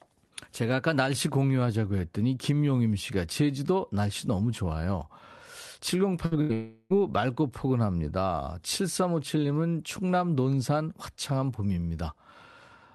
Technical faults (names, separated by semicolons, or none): burst of packet loss; long network dropout